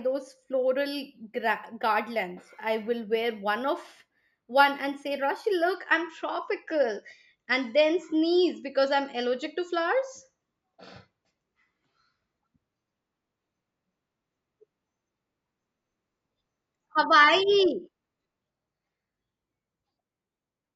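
Imaging from linear upsampling runs from 0.0 to 5.75 s. Straight-line interpolation, which fits a rise from 16 kHz to 48 kHz, dulls the top end and leaves a mirrored copy between 8 and 16 kHz, roughly 35 dB down, giving sibilants a faint metallic shimmer.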